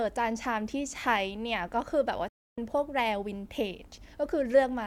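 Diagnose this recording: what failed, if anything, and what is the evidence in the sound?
A digital broadcast dropout at the reception and decoding stage: the receiver stopped getting valid frames and muted. The speech cuts out at 2.28 s with a fade of about 3 ms and returns at 2.58 s. That 288 ms gap fits nine or so lost frames, and that stretch of programme is simply gone.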